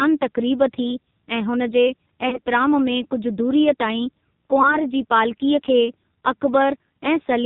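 Throughout, the speech carries heavy AMR narrowband mobile codec damage: nothing above 4 kHz, buzzy synthetic vocal-tract modelling consistent with a low rate near 5.9 kbps. At 2.30 to 2.40 s, just after "हुन जे", and again at 4.62 to 4.78 s, lost AMR speech frames produce a brief warbling dip where the decoder repeats old settings, which fits a single concealed 20 ms frame each time.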